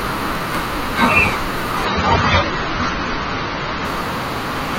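From 0.35 to 0.57 s, processor overload crackle: many missed deadlines on buffers of around 10 ms leave skipped slivers, heard as gritty tearing rather than one isolated click.

From 1.85 to 3.85 s, the adaptive stream switches to a lower bitrate. Treble above 6.9 kHz vanishes and artefacts rise, fitting a step from 96 to 24 kbit/s AAC, without any gap.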